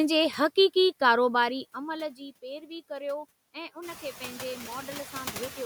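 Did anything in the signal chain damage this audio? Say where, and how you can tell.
Yes. Noise suppressor artifacts from call processing run throughout: background noise is pulled down by about 14 dB between phrases and rises back under the speech.

Zipper noise appears from 1.13 to 2.30 s, as a gain stage drops the level by roughly 15 dB in unsmoothed steps, about 50 a second. That fits per-buffer updates, each step leaving a small tick.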